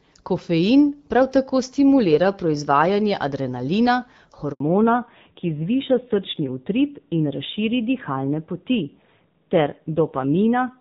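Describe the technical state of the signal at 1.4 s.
At 1.4 s the speech is intact, carried through the AMR wideband (HD Voice) codec at 12.65 kbit/s with no fault at that moment.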